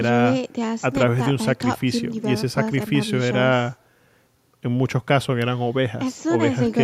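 Nothing in this speech recording stood out as a technical problem on listening.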